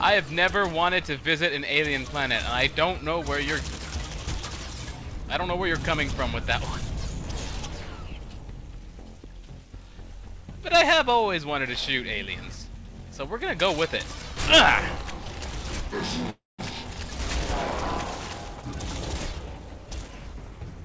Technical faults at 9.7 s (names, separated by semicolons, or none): none